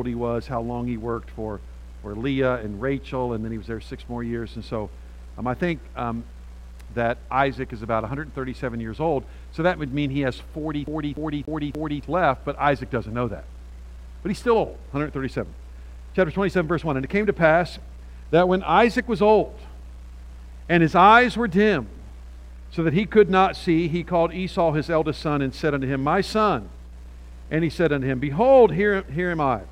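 From 10.87 to 12.03 s, CD stuck on one turn: a 290 ms slice repeats four times, each jump briefly muted, unlike gapless buffer loops.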